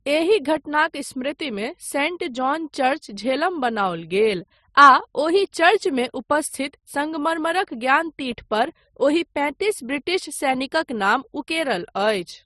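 Transcoding between lossy codecs runs throughout this speech clip. Nothing is present above 12.2 kHz, and the coding artefacts of two different codecs are heard together. Each pass smears the sound in its own way, and the second spends bits re-encoding the first's damage instead of the speech. The combination likely fits an MP3 encode at around 38 kbit/s followed by Opus at around 48 kbit/s, with the lowest cut-off in that chain surviving to the end.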